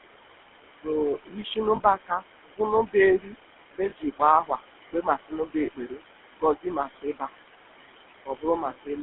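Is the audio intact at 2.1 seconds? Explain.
No. Between 1.18 and 3.35 s the noise suppressor cut into the speech, mistaking it for noise and lowering it by up to about 21 dB, so parts sound swallowed or faint. Noise suppressor artifacts are also present there: background pulled down by about 18 dB, frame by frame, so the noise sinks between the words and rises under them. Over the same moment the GSM full-rate codec adds a buzzy, gravelly roughness within a 250 Hz to 3.4 kHz band, consistent with its 13 kbps coding.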